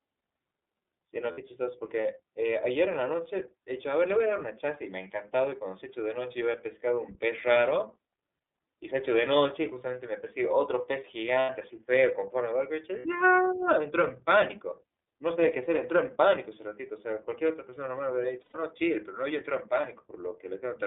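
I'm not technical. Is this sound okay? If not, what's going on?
No. The speech sounds thin, muffled and slightly robotic throughout. That is the iLBC codec, a phone-call compression that keeps only about 250 Hz to 3.6 kHz. Brief buzzy, held-vowel blips at 1.32, 11.4, 12.98 and 18.41 seconds, each 60 to 120 ms long, are lost iLBC frames. The decoder filled each missing stretch by repeating the last bit of voice.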